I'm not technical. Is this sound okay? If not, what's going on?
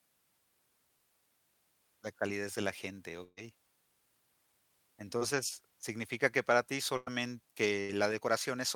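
No. In this speech recording, at 3.23–3.39 s, 6.97–7.09 s and 7.81–7.91 s the sound briefly freezes into a held buzz or fading hiss, then jumps ahead with a bit missing. Each is a burst of packet loss: chunks of the call arrived too late, so the receiver stretched the last sound to cover the gap.

At 5.17–5.23 s there's a quick smear or wobble. This is short concealed packet loss: a few hundredths of a second never arrived, and the receiver patched the hole by continuing the previous sound before blending back in.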